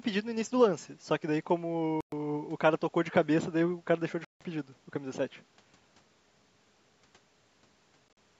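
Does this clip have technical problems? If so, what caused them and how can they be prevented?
Yes. Packets on the wireless link likely reached the headphones too late and were discarded, so this speech clip shows a Bluetooth dropout: the sound cuts to silence and then resumes further along, as if it kept playing during the gap. Holes run from 2.01 to 2.12 s (about 116 ms) and from 4.25 to 4.41 s (about 160 ms). From 8.09 to 8.17 s there are scattered gaps totalling 58 ms, the longest 44 ms. Keeping the headphones close to the source and away from Wi-Fi congestion or obstructions prevents this.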